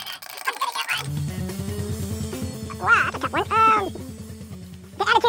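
From start to finish the sound runs at twice its proper speed and an octave high. This is audio read two samples at a time (double speed): each pair of samples was taken as one frame, halving the duration.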